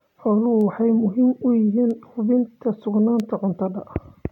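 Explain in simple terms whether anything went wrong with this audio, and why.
Word clock ticks, about three of them, roughly one and a half seconds apart between 0.61 s and 3.20 s. The receiving device ran on its own clock, drifting a few tens of parts per million from the sender's, so at each slip a single sample was dropped or repeated, producing a tick.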